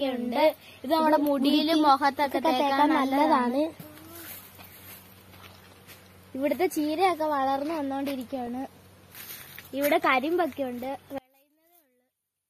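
Throughout, the audio is dull and carries a gurgling, granular roughness, likely from MP2 compression at a low rate, consistent with roughly 80 kbps. The allocator starves the upper sub-bands, so a spectrogram shows the top switched off and flickering in blocky bands above a coarse, speckled remainder. DAB burbling breaks in at 3.74–4.01 s, 8.28–8.81 s and 10.89–11.00 s as bursts of blips and squelches, where bit errors reach the MP2 data and corrupt scale factors and samples. The spectrogram shows isolated sub-band rectangles jumping in level for single frames, densest in the two later bursts. From 11.18 s to the end, the sound collapses when heard in mono, dropping by about 35 dB to a faint residue. The likely cause is one channel inverted, so the shared centre content cancels in the sum. The mono waveform shrinks almost to a flat line there.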